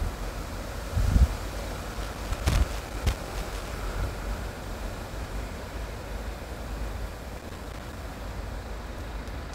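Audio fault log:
1.94–3.73 s and 7.37–8.03 s: loose connector crackle. Irregular bursts of crackle and scratching break up the sound as a worn or dirty contact rapidly makes and breaks, chopping the signal, while any DC on the line adds sharp pops at each reconnection.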